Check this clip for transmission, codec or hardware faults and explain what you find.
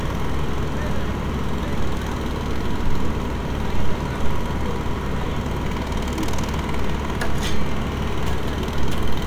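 There's one hardware fault here. From 5.96 to 6.05 s, a phantom power thump: a supply switched on or off on a live input pushes a step through the coupling capacitors, giving a low thud peaking around -14 dBFS and dying away in about 21 ms.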